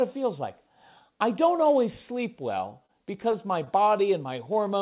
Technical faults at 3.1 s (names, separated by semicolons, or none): repeated stalls (stutter)